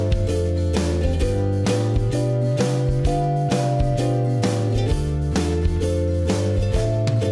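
No technical faults are audible.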